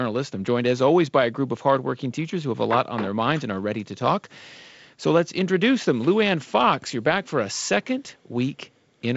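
Speech carried over G.722 wideband telephone coding, with the top end stopping near 7.7 kHz, and no technical faults.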